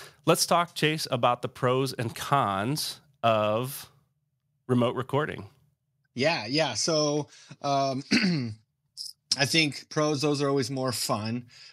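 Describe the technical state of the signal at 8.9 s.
At 8.9 s the speech signal is intact, with no audible fault at that moment.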